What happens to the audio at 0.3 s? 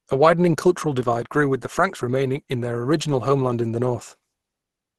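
At 0.3 s the speech sounds muffled and hoarse, with nothing above 12.1 kHz, likely from Opus compression in hybrid mode, fitting a low bitrate around 16 kbps throughout.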